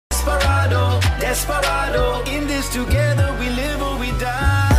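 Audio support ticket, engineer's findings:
No audible faults found.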